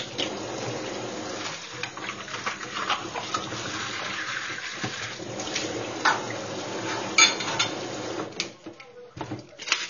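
From start to finish the sound is dull and smeared, with nothing above about 7.1 kHz and a plainly audible warbling, fizzy texture on sustained and bright parts. This is likely AAC compression: the AAC-LC coder has cut the top of the spectrum and quantised the remaining frequency lines so coarsely that bands come and go from frame to frame, leaving holes or noisy fill. The damage fits a low bitrate of around 24 kbps.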